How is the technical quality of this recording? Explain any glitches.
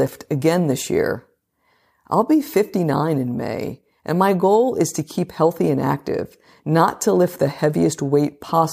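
The recording has one clear fault in its second half. Crude rate conversion runs from 4.77 s, just after "and my goal", to the end at 8.73 s. The samples were recalculated by simple linear interpolation with no filtering, which fits a 44.1 to 48 kHz conversion. That leaves an inharmonic fizz, roughly 35 dB below the speech, that rides on the louder and brighter sounds.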